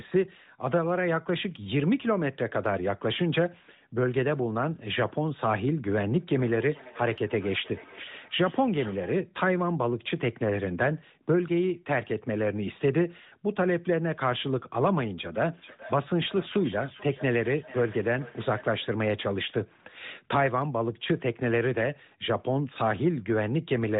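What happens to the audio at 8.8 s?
At 8.8 s the sound sits inside a stretch of feedback echo between two devices running from 6.18 to 9.26 s. A second device in the room replays the call, its microphone catches that playback, and no echo canceller removes it, so each sound returns roughly every 0.4 s, thinner and ringing, peaking at about -19 dB below the speech. On a spectrogram, faint delayed copies of each speech pattern trail behind it at that spacing, all below the 4 kHz ceiling of the narrowband mobile codec.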